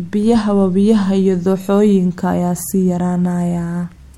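No technical faults can be heard anywhere in this speech recording, which holds steady and intact throughout.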